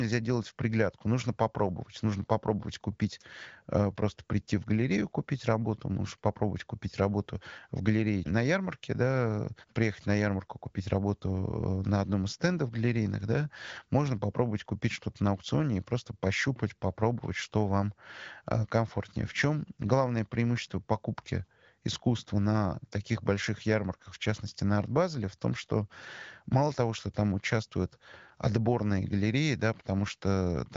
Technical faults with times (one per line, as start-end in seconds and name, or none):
none